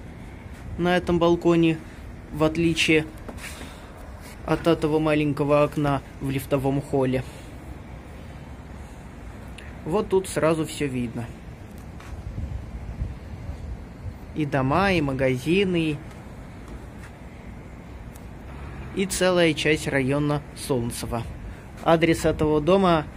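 At 11.78 s a single sharp tick cuts through the audio: a bit error spike, where one flipped bit in storage or on a digital link has pushed a single sample to a wrong value, peaking at about -22 dBFS, before the next sample returns to normal. On the waveform it shows as a lone one-sample needle; on a spectrogram, a thin vertical line spanning all frequencies, unrelated to the surrounding signal.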